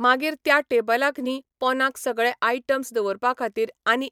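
No dropouts, clicks, distortion or other transport faults turn up anywhere in this speech recording.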